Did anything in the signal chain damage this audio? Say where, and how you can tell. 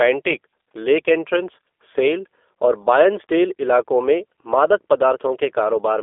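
Yes. At the codec stage, G.729 coding runs throughout: speech is confined to roughly 300 Hz–3.5 kHz and sounds rough and synthetic from its sparse pulse excitation, fitting an 8 kbit/s coder.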